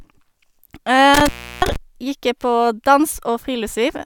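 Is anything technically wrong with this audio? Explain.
Yes. From 1.14 to 1.76 s there is an intermittent contact. A loose cable or plug briefly loses its connection and breaks the signal path for about 334 ms. The speech drops out with crackle at both edges, leaving faint hiss during the gap.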